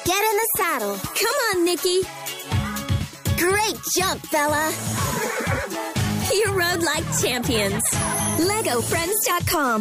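No technical faults are audible anywhere in the recording.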